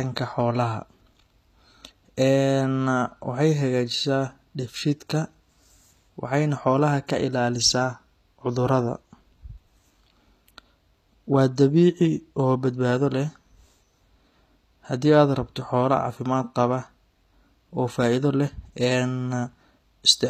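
Throughout, the speech likely passed through HE-AAC compression at a rate that fits 24 kbps. The treble is rebuilt from copied lower bands rather than coded, so its harmonics misalign with the true ones, and s sounds turn plainly gritty and metallic.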